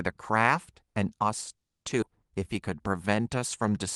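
Call audio freeze, 1.55 to 1.85 s: the speech stops for about 280 ms, almost all of it silence, then resumes exactly where it left off with nothing lost. The likely cause is delayed packets draining the jitter buffer, so the receiver had nothing to play until they arrived.

Skip ahead, 2.01 to 2.04 s: playback jumps forward with only a 10 ms join, and roughly 150 ms of speech is gone. The two sides are butted together almost directly, as when a stretch of audio is discarded while later packets are already queued.

Jitter buffer slow-down, 2.39 to 3.71 s: the speech runs at 90% speed with its pitch unchanged, sounding drawn out. The receiver repeated single pitch periods and bits of pauses to rebuild its reserve, adding 139 ms in total over this stretch.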